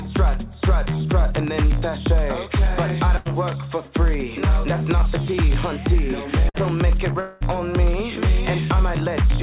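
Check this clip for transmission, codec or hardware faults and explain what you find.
Three transmission faults are present: two short bursts of packet loss and one longer gap that is likely a network dropout. The audio has nothing above 4 kHz, consistent with a narrowband call codec.

Burst of packet loss, at 3.17 to 3.28 s and 6.49 to 6.57 s: the sound briefly freezes into a held, fading tone or hiss, then jumps ahead. Consecutive packets failed to arrive in time, so the receiver stretched the last audio it had across the hole, about 81 ms the first time and 50 ms the second. About 90 ms and 60 ms of the original sound are missing.

Long network dropout, at 7.20 to 7.44 s: a longer smeared stretch of about 205 ms where the last sound is held and decays. It never falls to true silence before the audio resumes further along, and roughly 210 ms of material is gone. The likely cause is a brief interruption in the network stream, with the receiver's concealment filling almost the whole gap.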